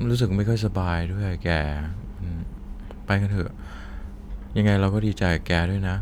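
Nothing in the recording stood out as a technical problem on listening.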